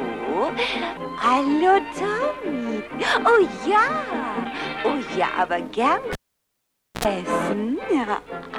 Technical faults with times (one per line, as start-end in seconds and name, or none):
6.13-7.05 cable pulled and plugged in